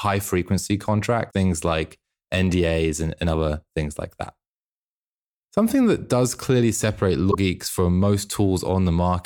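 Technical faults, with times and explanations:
1.29–1.34 s and 7.30–7.35 s, broken MP3 bit reservoir: two brief glitches where the speech skips forward with a short chirp, burst of noise or hole, the second between "that does clearly separate" and "geeks from". It's likely dropped frames, each about 26 ms long, leaving the next frame decoding borrowed bits from the wrong data.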